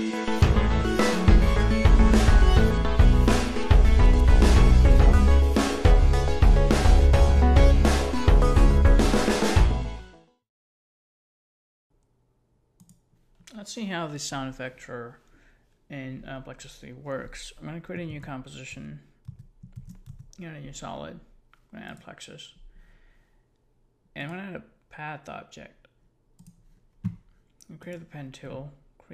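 No technical faults are audible anywhere in the recording.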